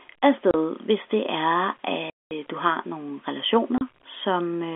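Packet loss filled with silence strikes at 0.51 s, just before "hvis det er", at 2.1 to 2.31 s after "hvis det er", and at 3.78 s after "du har nogle". Lost packets were replaced with silence, so the narrowband telephone sound drops out with hard edges: two 30 ms gaps and one 210 ms gap, seven times as long, which points to 30 ms packets.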